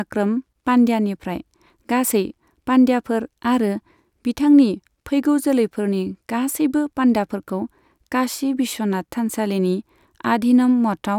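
No technical faults are audible.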